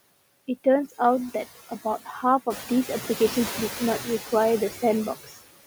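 Noise suppressor artifacts run throughout the speech: steady background is cut by about 13 dB frame by frame, pumping between phrases, including after room noise rises near 2.5 s.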